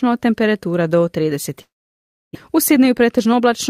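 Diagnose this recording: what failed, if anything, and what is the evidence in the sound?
A long network dropout is the likely cause of the gap in this speech from 1.61 to 2.37 s, just after "temperatura do". Packets stopped arriving, and the receiver filled the hole by extending the last sound as a fading buzz before settling into silence for most of the stretch. About 0.6 s of the original audio never returns. When sound resumes, it picks up later in the utterance, and the playout delay has shifted by around a tenth of a second.

From 2.49 to 3.69 s the jitter buffer, now holding more audio than its target, performs a speed-up to shed the excess. It repeatedly cuts short pitch-period-sized pieces, removing roughly 70 ms in total. Playback runs about 5% faster with the pitch unchanged, so the final stretch of speech sounds slightly hurried and clipped in rhythm rather than higher in tone.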